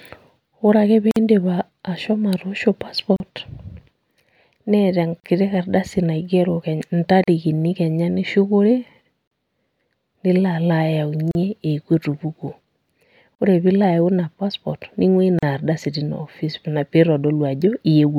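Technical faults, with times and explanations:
1.11, 3.16, 5.20, 7.24, 9.28, 11.31, 13.35, 15.39 s: gap at a join of encoded pieces, silences of 51 ms then 37.6 ms every 2 s, from encoder delay and end padding left untrimmed.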